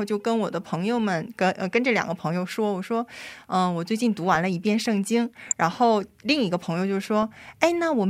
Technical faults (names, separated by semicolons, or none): corrupt frame decoded